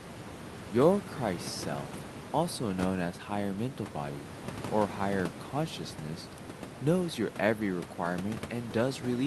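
Nothing goes wrong here; the room noise sits about 13 dB below the speech, and the call codec limits the top end at around 12 kHz, as it normally would.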